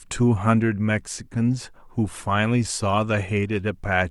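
No technical faults are audible.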